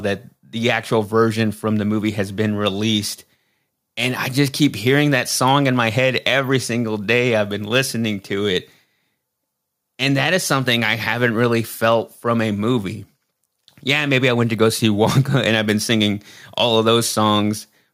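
No fault is audible anywhere in the recording, with no dropouts, clicks, distortion or timing irregularities to report.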